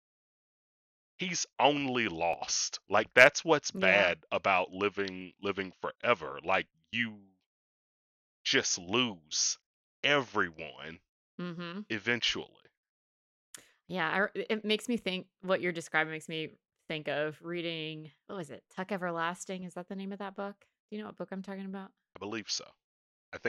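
Clock drift buffer slips from 0.89 to 22.49 s: regular clicks every 1.44 s in the speech, likely from mismatched device clocks, roughly 300 ppm apart, dropping or repeating small sample blocks.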